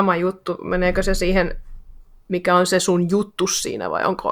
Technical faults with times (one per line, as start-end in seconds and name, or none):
none